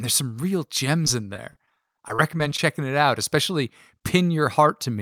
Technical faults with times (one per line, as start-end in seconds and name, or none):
1.05-2.59 repeated packet loss (robotic sound)